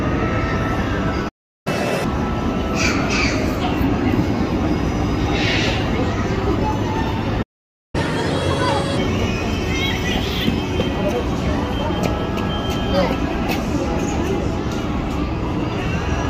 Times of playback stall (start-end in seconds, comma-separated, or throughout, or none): 1.28-1.67, 7.42-7.95